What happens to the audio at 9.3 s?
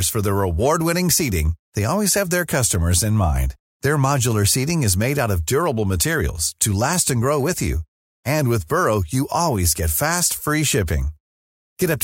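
Nothing goes wrong at 9.3 s; the speech carries on intact through that moment, with no dropout, click, distortion or other fault to be heard.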